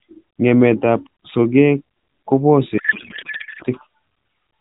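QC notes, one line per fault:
2.78 to 3.64 s, codec payload misread: for just under a second the speech gives way to garbled noise and warble that barely tracks what was being said. The decoder is still getting well-formed AMR frames but is reading the bits in the wrong places, which fits octet-aligned packing being read as bandwidth-efficient. The narrowband AMR coding around it, which sounds like a high-rate mode such as 12.2 kbps, comes back once the framing lines up again.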